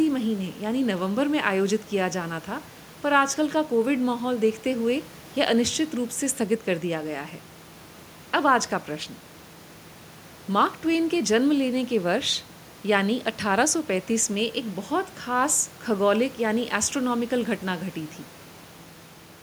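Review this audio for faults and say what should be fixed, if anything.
No faults; nothing needs fixing.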